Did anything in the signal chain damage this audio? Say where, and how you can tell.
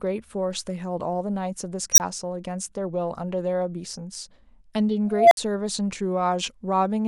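Yes, there's an unstable filter somewhere in the processing stage, a recursive filter running away with itself. At 1.92 s a squeal around 5 kHz swells over about 64 ms, clips, then drops to 20 ms of silence. At 5.11 s a lower tone, roughly 700 Hz, builds for about 200 ms and leaves 60 ms of silence. The feedback keeps growing until the values overflow, and the output goes dead until the filter resets.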